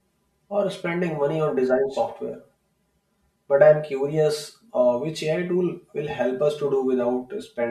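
Channel delay (comb filtering) runs through the whole clip. One channel arrives roughly 5 ms behind the other, and when the two are summed to mono, the parts of the speech they share cancel at evenly spaced frequencies. The first notch sits around 100 Hz and the rest repeat every 200 Hz or so above it. The speech therefore sounds hollow and phasey throughout, with a fixed coloration.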